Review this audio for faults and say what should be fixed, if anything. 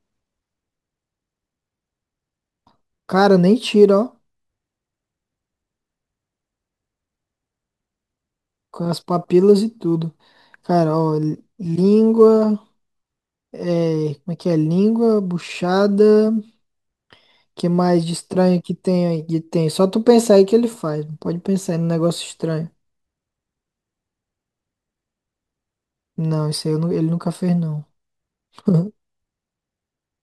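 A faint hiss and roughness runs through the speech throughout, louder on loud and bright sounds, silent in pauses: sample clock jitter of roughly 4 µs, leaving error about 35 dB down. Fix it by clocking the converter from a stable, low-jitter source.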